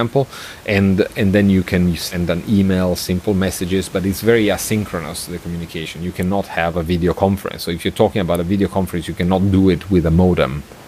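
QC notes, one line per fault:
Nothing to flag here, just a bit of room background sitting about 23 dB under the speech, which is part of the recording itself.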